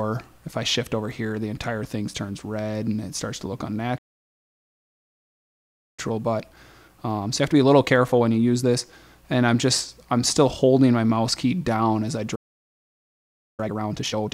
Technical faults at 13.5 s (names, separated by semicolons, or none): playback stall; time-compressed catch-up